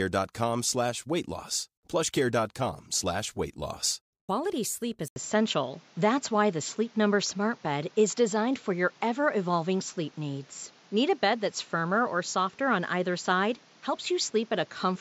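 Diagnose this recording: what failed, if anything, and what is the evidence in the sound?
At 5.08 s the speech drops out for about 80 ms. When it returns, it sounds duller and boxier. It stays that way to the end. Nothing remains above 7.6 kHz. A new background noise sits about 30 dB under the speech, and the level shifts by a few decibels. The fault is in the capture stage. The likely cause is an input switched to a poorer device, with a narrower band, its own tone and its own noise.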